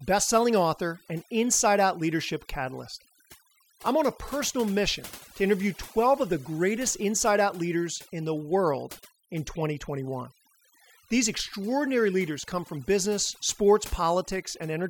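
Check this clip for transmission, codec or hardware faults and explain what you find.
One processing fault runs through the whole speech clip: overdone noise removal. A noise reduction stage set far too aggressively pulls individual frequency bands down or shuts them off wherever they sit near its noise estimate, taking quieter speech detail with them. The background collapses into near silence scattered with twinkling specks. On a spectrogram this shows as isolated bright dots dotting a blank floor and ragged, gappy harmonics; the waveform's pauses sit unnaturally flat.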